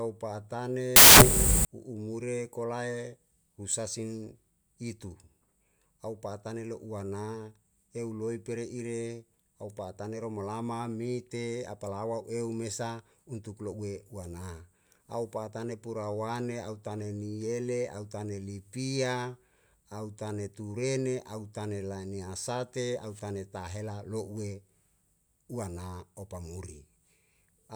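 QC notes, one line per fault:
0.96–1.65 s, samples built from the wrong bytes: for about 0.7 s the speech turns into loud, harsh broadband noise, because the reader misassembled each sample's bytes and the twitchy low bits ended up as the big part of every value.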